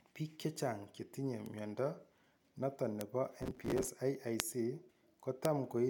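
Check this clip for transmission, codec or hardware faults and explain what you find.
Two kinds of fault are present in this speech clip.

Bit error spikes occur at 1.46, 3.01, 4.4 and 5.45 s. A single flipped bit throws one to three samples far off. Each gives a sharp, broadband tick.

Processor overload crackle runs from 3.42 to 3.89 s. Around fifty buffer deadlines are missed across this stretch, each replaced with stale audio. The short repeats fit buffers of about 5 ms and produce gritty tearing.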